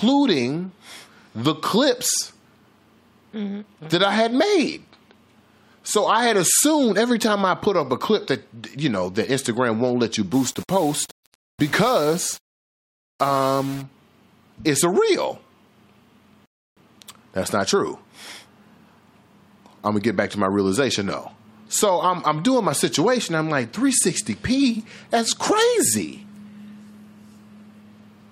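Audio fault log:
10.33–13.82 s, low bit depth without dither: just after "won't let you" the speech turns grainy, with a rough error around 20 dB below the signal. Likely caused by rounding to about 6 bits. Unlike steady hiss, the grit rises and falls with the speech and roughens the quieter sounds.
16.46–16.77 s, rebuffering stall: the speech stops dead for about 0.31 s of silence and then continues exactly where it left off. Unlike a dropout, nothing is missing. The player waited for data, so time is added instead of audio being lost.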